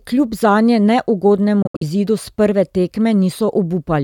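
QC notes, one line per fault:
1.62–1.83 s Bluetooth dropout: sound drops to silence in several abrupt gaps, the longest 70 ms, and resumes further on; likely late packets dropped before playback.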